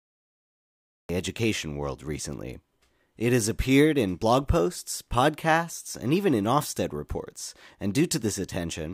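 The clip opens with a cut-off start. From 0 to 1.09 s there is only digital silence. At 1.09 s the speech begins abruptly, already in the middle of a sound, just before "education world recently". There is no natural attack and no fade-in. The capture or stream began late, so the first part of the utterance was never recorded. The result is a hard, unnatural jump from nothing into full speech.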